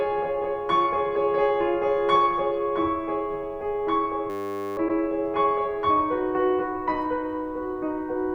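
At 4.3 s the music locks into a system hang loop. Until 4.77 s, one 10 ms fragment repeats exactly, 47 times, at 100 Hz. This happens because the computer or driver stalled while the sound hardware kept cycling through the same small stretch of its ring buffer. With such a short loop, the result is a steady 100 Hz buzz rather than a stutter, and about half a second of music never arrives.

Shortly after, from 4.87 to 4.98 s, repeated frames replay a 104.5 ms block once more. A short run of compressed frames was delivered twice, and the decoder played them again. This is heard as a single stutter. Unlike the hang loop, it repeats a longer chunk that is heard as music, and only once, and it adds 104.5 ms to the length of the audio rather than losing any.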